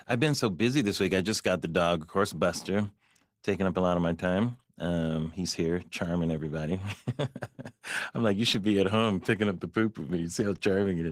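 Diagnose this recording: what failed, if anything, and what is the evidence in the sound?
Opus voice compression runs through the whole recording, a codec-stage fault. The damage is plainly audible: the speech has a hoarse, slightly robotic texture because the low band is modelled by linear prediction with a coarsely quantised excitation, and the sound above 8 kHz is carried by a thin transform layer on top. The character fits hybrid Opus at around 16 kbps with 20 ms frames, where too few bits reach either layer.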